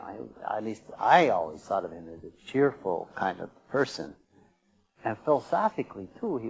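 No technical faults are audible.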